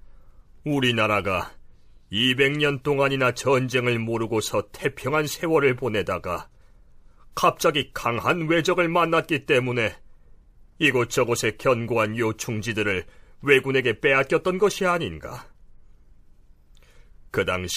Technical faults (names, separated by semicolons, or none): none